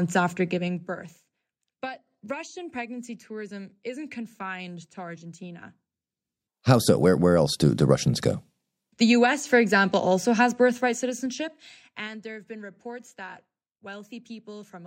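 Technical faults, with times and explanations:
0.44–1.12 s, zipper noise: the level drops by about 15 dB in audible stairs of about 2 dB each, around ten a second. Nothing smooths the jumps between gain values, so each one puts a tiny click into the waveform, and together they make a fast ticking under the sound.
10.69–12.27 s, zipper noise: right after "for example also has", the same stepped fade comes back, about 20 dB deep in about 2 dB jumps at roughly seven a second. The unsmoothed steps give a slower zipping that stops just before "have been reports that".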